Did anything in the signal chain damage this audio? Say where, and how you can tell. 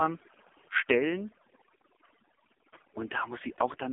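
Yes. At the call-processing stage, overdone noise removal runs throughout the clip: the background drops and breaks up into twinkling specks. The suppressor is cutting individual frequency bands it judges to be noise, taking quiet speech components with them.

At the codec stage, the AMR narrowband mobile codec damages the whole clip. Content sits in a 250 Hz to 3.4 kHz telephone band with nothing above 3.5 kHz, and the speech is heavily buzzy and synthetic, which fits a low AMR-NB mode, about 5.15 kbps.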